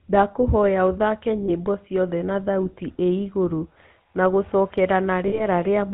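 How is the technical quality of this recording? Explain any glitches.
The technical quality is poor: the speech went through the GSM full-rate codec, and it drops out briefly twice.

GSM full-rate codec, throughout: the codec models the vocal tract and drives it with sparse, regularly spaced pulses, which fits a 13 kbps stream. The result is a plainly audible buzzy, gravelly roughness and no content above 4 kHz.

Lost GSM frames, at 1.46–1.50 s and 5.28–5.43 s: the decoder filled missing frames by repeating the last good frame's settings. This fits a single 20 ms loss first and about 40 ms later, and it leaves a short, rough metallic ring.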